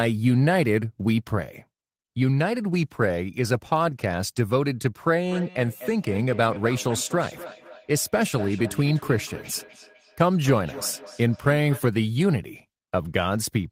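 From 5.28 to 11.87 s there is feedback echo between two devices. Two devices in the same room share the call. One plays back what the other's microphone sent, and that microphone picks it up again. Each echo canceller removes only its own device's playback, so this loop goes unchecked. The speech returns at a fixed interval of about a third of a second. The repeats sound thinner and more ringing, peaking about 16 dB below the speech.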